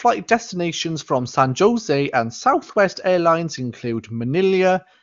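Nothing goes wrong anywhere in this one, just speech carried over the AMR wideband (HD Voice) codec at a quality that fits its top 23.85 kbit/s mode, with the sound topping out around 7.2 kHz as that path does.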